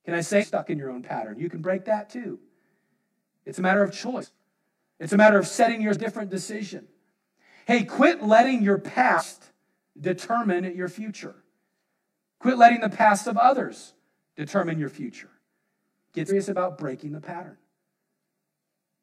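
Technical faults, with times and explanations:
Throughout, channel delay (comb filtering): one channel runs roughly 20 ms behind the other, and when the two are summed, the shared content cancels at evenly spaced frequencies. The first notch falls at about 30 Hz, and the rest repeat up the spectrum in a dense series. The speech sounds rough or slightly doubled. On a spectrogram this shows as fixed, evenly spaced horizontal dark stripes that stay put regardless of what is being said.
0.40–0.44 s, 4.21–4.25 s, 5.92–5.97 s, 9.17–9.22 s and 16.28–16.32 s, compressed frames skipped: at each point the audio jumps ahead, dropping whole blocks that fit a 46.4 ms frame length. The gaps are about a second at 0.40 s (just before "in your own pattern") and at 5.92 s, about 200 ms at 4.21 s (after "a matter of") and 16.28 s, and about 150 ms at 9.17 s (after "quit letting your"). In the waveform the envelope changes abruptly, and the spectrogram shows a brief vertical seam.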